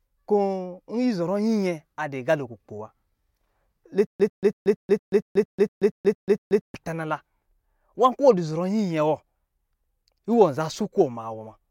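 A likely stall in playback or streaming, with each retry replaying the last fragment and then running dry, produces a stutter with silent gaps from 4.07 to 6.75 s of the speech. The same 100 ms snippet of audio repeats 11 times at a steady 231 ms period, separated by about 131 ms of dead digital silence, giving a mechanical, ticking chop. Whatever should have played across those seconds never arrives.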